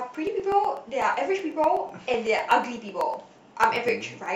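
From 0.15 to 4.26 s the speech carries periodic USB or driver dropouts, about every 0.125 s. A blocked bus or driver skips roughly half a millisecond each time, giving steady ticks over the voice. A waveform shows small regular discontinuities, and a spectrogram shows faint evenly spaced vertical lines.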